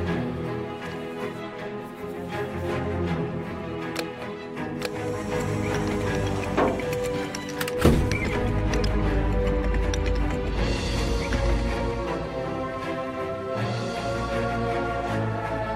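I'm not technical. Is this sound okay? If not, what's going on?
Yes, no faults detected; nothing to flag.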